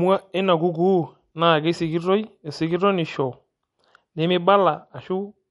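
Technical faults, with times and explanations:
Throughout: MP3 compression. Compression damage is plainly audible across the speech, and nothing is present above 11.2 kHz. The likely cause is MP3 encoding at a low bitrate, one that fits around 48 kbps. With so few bits, the encoder drops weaker frequency detail that its hearing model ranks as less important, and those parts come and go between frames. It also removes the top band entirely, which explains the sharp ceiling at 11.2 kHz.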